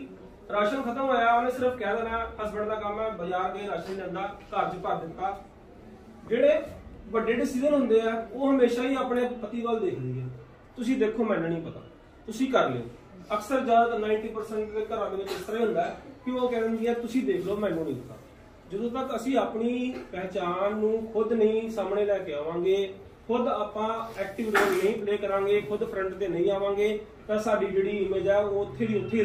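Nothing technical goes wrong anywhere in this recording, so there's really nothing here to flag.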